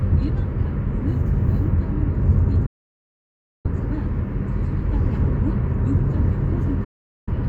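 At 2.66 s the sound fades out over about 8 ms and stays silent until 3.69 s. This is a digital broadcast dropout. The receiver stopped getting decodable frames and muted its output. About a second of audio is gone, which points to roughly two dozen lost frames. A second, shorter dropout runs from 6.84 to 7.32 s, with the same quick fade, and removes about 0.43 s. Both gaps are true silence, and the material sent during them is not recovered.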